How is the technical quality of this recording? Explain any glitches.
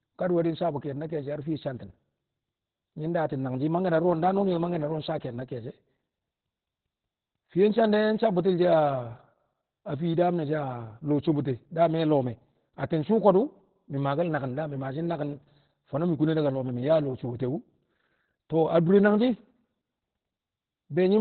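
Technical quality is poor throughout the speech, with heavy codec damage from start to finish.

Opus voice compression, across the whole clip: the encoder runs in its SILK linear-prediction mode with the band narrowed to nothing above 4.4 kHz, and the coarse excitation coding suggests roughly 8 kbps. The result is muffled, hoarse, slightly robotic speech.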